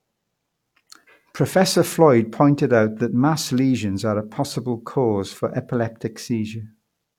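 A speech recording with nothing technically wrong with it.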